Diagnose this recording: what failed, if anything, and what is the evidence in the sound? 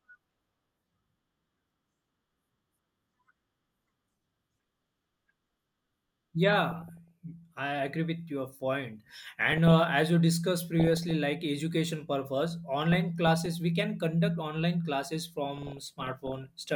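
The failure is DAB burbling at the broadcast reception and MP2 decoding stage. The speech burbles from 4.56 to 5.57 s (the worst, roughly one and a half percent bit errors), 6.50 to 7.11, 8.87 to 9.82, 10.80 to 11.11, 12.92 to 13.46 and 15.54 to 16.49 s. Weak reception lets corrupted samples and scale factors pass error correction, so individual sub-bands get short noise blips or jump in level for up to a frame. On a spectrogram this appears as flickering rectangular patches in isolated bands.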